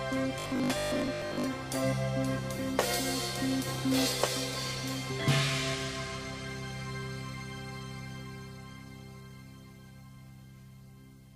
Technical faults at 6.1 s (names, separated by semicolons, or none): none